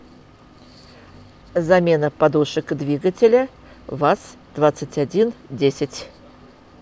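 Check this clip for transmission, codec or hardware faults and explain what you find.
Listening closely to the speech recording, nothing stood out as a fault.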